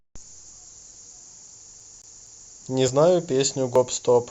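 From 1.8 to 2.52 s the speech falls into a CD stuck on one turn: a 249 ms slice plays three times, each jump marked by a brief mute. On a waveform the same envelope repeats at even intervals, with thin gaps as vertical notches on a spectrogram.

At 2.01, 2.88 and 3.76 s the speech jumps ahead without silence, each time losing a few tens of milliseconds. These are likely dropped buffers (overrun). Each appears as a waveform discontinuity and a thin vertical broadband line on a spectrogram.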